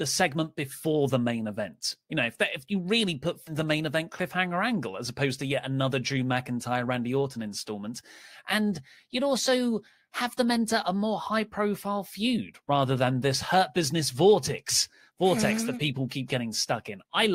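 At 3.47 to 3.53 s the speech jumps abruptly ahead with a brief blip. This is most likely a stream segment skipped, where one chunk failed to load and playback resumed at the next. A waveform shows a hard discontinuity; a spectrogram shows an abrupt vertical seam.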